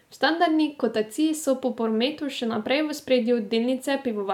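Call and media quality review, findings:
No faults found: the speech signal holds steady level and continuity throughout, with nothing in the capture, transport or playback chain calling for action.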